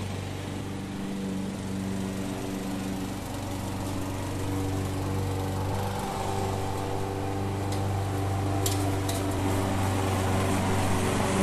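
Brief smeared blips at 0.60, 1.54, 5.72 and 9.38 s, each followed by the sound jumping ahead roughly 0.3 to 0.4 s, are compressed frames skipped: whole 26.1 ms frames missing or rejected by the decoder.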